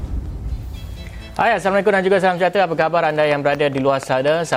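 A train of clicks runs from 3.31 to 4.54 s, about seven regular pops at 4.1 per second, well above the sound, likely interference or a faulty connection.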